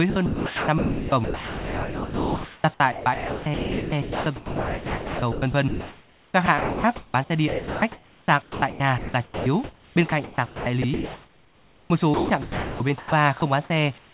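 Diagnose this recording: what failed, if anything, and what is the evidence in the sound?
Sound chopped by the voice detector in call processing, 0.10–2.64, 2.92–7.14 and 7.48–13.12 s: speech edges likely swapped for comfort noise, showing as smooth, featureless patches between detailed spectrogram bands.

Sound dropped by the voice detector at 13.40–13.42 s: a brief gap, likely a detector misfire, where the waveform's speech detail flattens into steady noise before resuming.

Comfort noise in place of the background from 13.98 s to the end: a smooth, flat noise floor about 5 dB quieter, likely from discontinuous transmission during silence.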